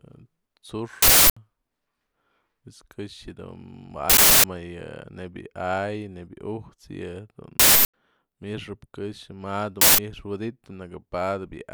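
Speech interrupted by loud bursts of harsh digital noise at 1.02–1.37 s, 4.10–4.44 s, 7.60–7.94 s and 9.81–9.98 s. This is an uninitialised buffer: blocks were played before audio was written, so leftover memory came out as samples, with lengths fitting 16384- and 8192-sample buffers.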